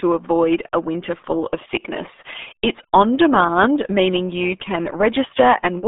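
From start to finish the speech has been squeezed through the RealAudio 14.4 codec, a dial-up era coder whose coarse rebuilding of the signal fits a bitrate of about 8 kbit/s. The band is cut to roughly 250 Hz to 3.6 kHz, with nothing above 3.7 kHz, so the voice sounds boxed-in and muffled, thin at the bottom and dull at the top. Heavy coding damage adds a gargly, watery smear to every syllable.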